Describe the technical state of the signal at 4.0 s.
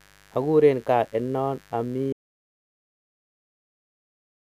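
Audio dropout to silence covers 4.0 s, running from 2.13 s to the end of the clip. The input was likely lost, through a disconnected device or a failed link, while writing continued as silence, so this moment is silent with no room tone.

Mains buzz at 50 Hz affects the clip throughout, at about 30 dB below the signal. Switching spikes twice per mains cycle produce harmonics reaching several kilohertz, heard as a steady raspy buzz.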